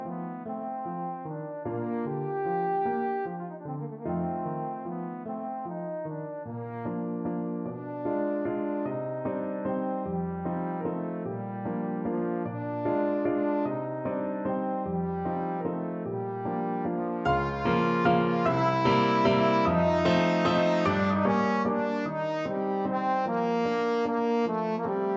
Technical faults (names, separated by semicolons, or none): none